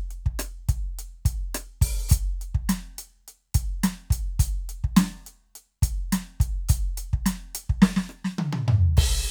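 A short piece of music with no technical faults to report. Nothing in the audio calls for a time or a cause.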